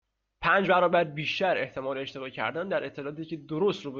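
No technical faults can be heard anywhere in this recording.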